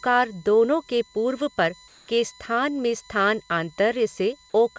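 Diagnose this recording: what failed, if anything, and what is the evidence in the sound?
USB whine in the analogue wiring: 1 ms bus frames leak through power or ground as a fixed 1 kHz whine, strongest at 4 kHz, about 30 dB below the speech.

Call processing, likely comfort noise in place of the background: from 1.88 to 2.08 s, between "दोनों के पूर्व पर" and "के स्थान में स्थान", the background becomes steady, featureless and about 2 dB quieter.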